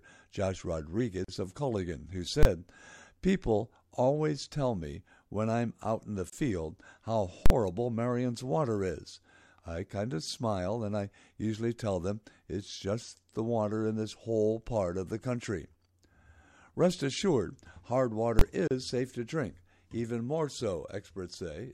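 Speech, and the recording was assembled from separately encoded pieces joined without trimming. Each encoder run leaves its start-up delay and the padding of its last frame in place, so every join is a gap at a join of encoded pieces: continuous speech drops into silence with smeared edges, then resumes where it stopped. This happens at 1.24 s for about 40 ms, at 6.30 s for 27 ms, and at 18.68 s for 33 ms. Separately, a calculation produced invalid numbers at full scale, so whole processing blocks were pinned at one extreme value, far beyond the speech peaks. At 2.43 s and 18.39 s the block lasts 21 ms, which fits a 1024-sample block, and each is heard as a single loud bang. At 7.46 s it lasts 43 ms, which fits a 2048-sample block, and is heard as a very loud pop at each end with no sound between.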